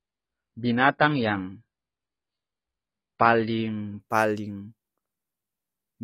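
From 0.0 to 4.0 s the speech shows an adaptive stream starting at a low bitrate. Nothing is present above 5.1 kHz and codec artefacts are strong, fitting AAC near 16 kbit/s. At 4.0 s the quality steps up abruptly, without a gap.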